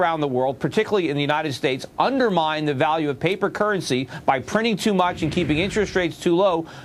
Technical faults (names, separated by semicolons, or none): none